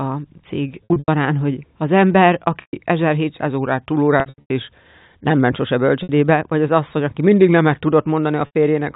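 Packet loss with pitch repetition first hits at 0.85 to 1.08 s, just before "hogy az ember": about 180 ms of audio went missing in scattered gaps, the longest 90 ms, and the receiver filled each hole by looping the last pitch period and fading it. The speech turns briefly buzzy and held, with small dips where the fill runs out. It recurs at 2.61 to 2.73 s, right after "hogy az ember", as a 120 ms stall.

From 3.50 to 5.50 s the speech slows by about 6% and drops roughly 111 cents, a little over a semitone, then snaps back. This is likely a drift correction step, where clock-matching software changed the playback rate in one jump to rebalance its buffer. Inside that stretch, at 4.20 to 4.50 s, the worst burst of loss removes about 240 ms in scattered gaps, smeared with repeated buzz. Shorter concealed gaps follow at 6.03 to 6.09 s, before "vagy az asszony aki", and at 8.46 to 8.54 s, each a brief frozen tone over the band-limited G.711 telephone sound.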